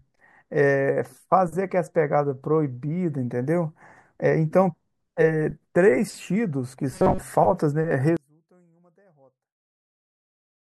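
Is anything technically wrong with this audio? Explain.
Yes, there are two problems.

Robotic sound from repeated short buffers, 6.91 to 7.22 s. New audio was likely arriving too slowly, so playback filled the gaps by looping the most recent short buffer and skipped most of the real speech in that stretch. The loop length sets a fixed buzz at about 188 Hz, which fits a buffer of roughly 5.3 ms. The voice becomes a stiff, metallic drone that only loosely traces the speech.

One channel inverted, from 8.17 s to the end. One stereo channel has likely been flipped in polarity, so the content shared by both channels cancels when they are combined into mono. The centred voice drops by about 35 dB and nearly disappears. What remains is only the small difference between the channels: a faint trace of the speech.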